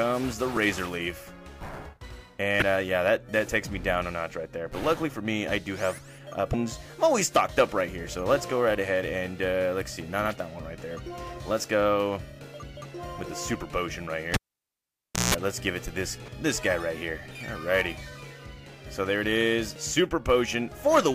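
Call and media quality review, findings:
Damaged data in the compressed stream: short blips at 2.59–2.62, 6.51–6.54, 16.25–16.29 and 19.73–19.76 s, each about 34 ms. Component: decoder input. Corrupted frames misread, decoder loses sync, skips ahead to the next valid frame header.

Cable pulled and plugged in: 14.34–15.34 s. Pop, then about 0.95 s of near silence, then a 171 ms burst of 60 Hz mains buzz as the plug tip makes partial contact, then a second pop as audio returns. Component: analogue input connector or cable.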